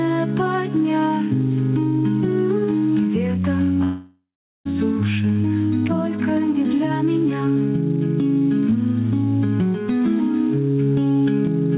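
From the start, the background repeatedly swells in the pauses and sinks under each loud sound, a pumping of roughly 10 dB. This is gain pumping, likely from input gain set far too high with a fast limiter clamping it. Unlike a slow automatic-gain drift, the dips track every loud onset.

From 3.84 to 4.67 s there is a long network dropout. The last sound smears into a fading buzz, leaving about 0.42 s of silence. Playback resumes with about 0.82 s likely lost in transit, skipped rather than delayed as a stall would be. The telephone-band sound throughout, with nothing above 4 kHz, fits a G.711 call path.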